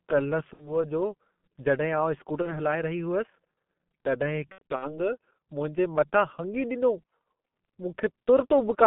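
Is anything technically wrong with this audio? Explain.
Yes, two things. First, the whole clip has gone through a G.723.1 codec at about 6.3 kbit/s, squeezed into a phone line band of roughly 150 Hz to 3.5 kHz. The coder works in coarse 30 ms chunks and tracks the speech with a slow, simplified model, and the damage here is heavy: the speech comes across muffled and rough, with nothing bright on top and consonants smeared together.

Second, there's VoIP packet loss concealed by the speech codec, three times: 0.53–0.85 s, 2.42–2.53 s and 4.52–4.93 s. The missing stretches are about 60 ms, 30 ms and 180 ms; the first fits two lost 30 ms frames and the second one. The last is scattered across about 300 ms, with its longest gap 90 ms. At each gap the decoder keeps going on the last pitch and filter it had, turning the gain down as it goes, so the speech smears into a buzzy or tinted, fading tone. 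Because each frame builds on the one before, the speech stays weak and warped for a short while after each gap, which is why these spans run longer than the missing audio itself.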